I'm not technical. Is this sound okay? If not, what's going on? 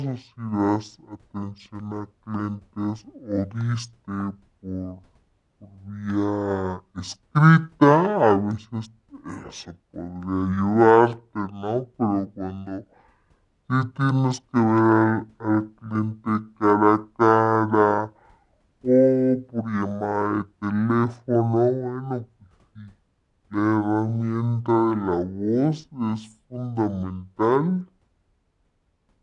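No. This speech has a wrong sample rate: the recording is being played back at half the speed it was captured at, with nothing correcting for the mismatch. That fits audio recorded at 48 kHz being played at 24 kHz. From start to finish, everything runs at half speed and the pitch drops a full octave, so voices sound deep, slow and dragged out, like a record played too slowly.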